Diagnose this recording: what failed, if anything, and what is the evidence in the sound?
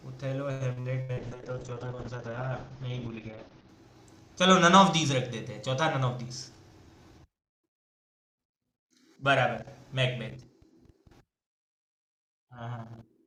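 At the network stage, repeated packet loss (robotic sound) hit between 0.51 and 1.20 s. Five gaps, the longest 90 ms, were patched by extending the previous audio, so about 42% of that span is concealment. The speech turns choppy, with pieces missing.

Right after, at the codec stage, a call bitrate drop cut the encoder from 64 to 7 kbps, with bandwidth narrowing from 20 kHz to 8 kHz between 1.19 and 3.75 s. The speech sounds muffled and rough until the bitrate returns.

In the receiver's jitter buffer, a speed-up between 5.98 and 6.70 s trimmed excess queued audio. Removing short pitch-period pieces, roughly a tenth of a second in all, plays the speech at 112% speed at unchanged pitch, so it sounds hurried.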